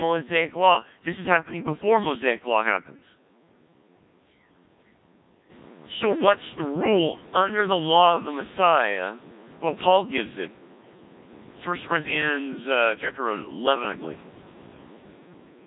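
Throughout the clip, the speech carries the robotic, buzzy character of a Codec 2 vocoder, with damage heavy enough to suggest its low 1.3 kbit/s mode. Only pitch, voicing and envelope survive, rebuilt as sine waves, and the room noise rising near 5.5 s is smeared along with it.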